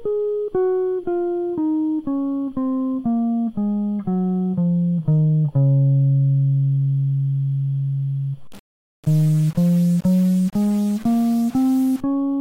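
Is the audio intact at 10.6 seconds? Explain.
No. At 10.6 seconds the music is inside a stretch of low bit depth without dither, running from 8.47 to 12.00 seconds. The graininess fits about a 5-bit signal. The likely cause is rounding to that coarse grid with no dither. The rounding error tracks the music, so it sounds like gritty distortion on quiet sounds. Quiet passages turn rough or sputter between steps. The error sits roughly 25 dB below the music.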